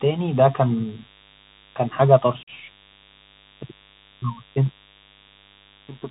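A 50 Hz mains buzz is getting into this speech recording, most likely through a dimmer, rectifier or unshielded lead, which injects switching spikes twice per mains cycle. The result is a steady, raspy buzz with harmonics reaching into the kilohertz range, sitting roughly 30 dB below the speech for the whole clip. The audio has also passed through a Bluetooth CVSD headset codec, consistent with a 64 kbps one-bit adaptive link. Nothing above 4 kHz survives, sibilants turn scratchy, loud bright sounds distort, and a grainy hiss runs beneath the speech throughout. Finally, unconcealed Bluetooth headset packet loss strikes between 2.43 and 2.50 s. Several consecutive voice packets, about 45 ms of audio, were dropped and replaced with silence or an idle pattern, leaving an abrupt hole after which the speech returns briefly quieter.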